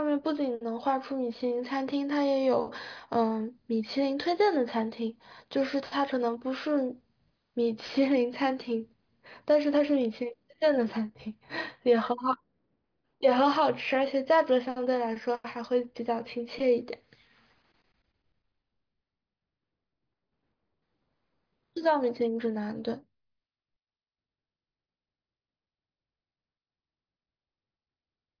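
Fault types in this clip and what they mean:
No fault types are present in this clip.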